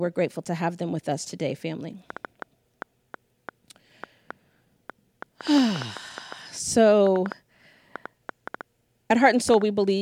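A speech recording with a train of clicks from 2.1 s to 9.6 s: around thirty similar ticks at an uneven pace, about four per second, peaking about 10 dB above the speech and audible in the pauses too. The likely cause is electrical interference from nearby equipment or a faulty connection or power supply.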